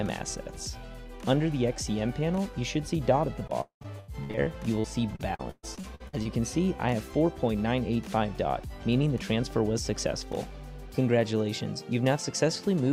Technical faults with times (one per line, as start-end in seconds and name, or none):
3.47-6.27 repeated packet loss (robotic sound)